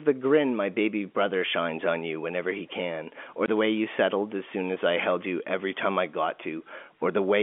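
At 3.46 to 3.48 s the speech drops out for a brief 20 ms hole with hard edges. This is packet loss filled with silence: what sounds like a single lost packet was replaced by nothing, heard through the narrow 250 Hz to 3.4 kHz band of the G.711 telephone line.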